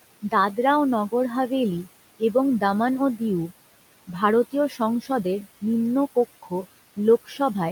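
A speech recording in which the room background, sitting about 18 dB under the talker, keeps pumping: it falls away in the gaps and swells back beneath each phrase. These are noise suppressor artifacts. The processor estimates the steady noise in each frequency band and pulls those bands down by about 17 dB frame by frame, so the residue shifts from one frame to the next instead of staying smooth. In three places the speech itself turns faint and swallowed: from 4.69 to 4.8 s it drops by about 12 dB, from 5.01 to 5.25 s by about 11 dB, and from 7.26 to 7.39 s by about 13 dB, each time for roughly a tenth of a second. This is speech cut by the noise suppressor. In those moments quiet parts of the talker's sound fell close enough to the noise estimate that the suppressor treated them as background and turned them down along with it.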